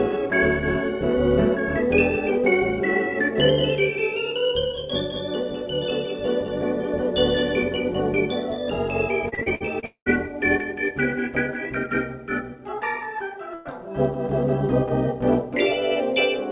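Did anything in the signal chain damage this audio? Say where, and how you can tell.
Yes. From 3.36 to 8.20 s a doubled audio track appears, likely from a second, slower capture path. A copy roughly 200 ms late and a few dB quieter sits beneath.

At the network stage, repeated packet loss between 9.29 and 9.85 s leaves five short holes, the longest 53 ms, patched by concealment and giving choppy, robotic sound.

A long network dropout likely follows, from 9.85 to 10.09 s. The last sound is stretched and faded out, then about a tenth of a second of silence before audio resumes further on.

A burst of packet loss at 13.54 to 13.79 s drops about 120 ms. The receiver holds and fades the last sound, then jumps ahead past the missing part.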